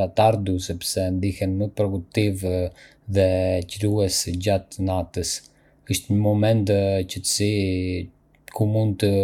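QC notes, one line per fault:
No faults detected in this clip.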